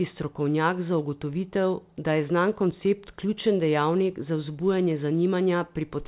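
Nothing stood out on listening to this speech recording, which came through the call path with its narrowband sound, nothing above 4 kHz.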